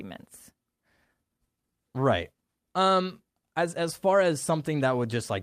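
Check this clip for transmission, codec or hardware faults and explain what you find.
No faults detected.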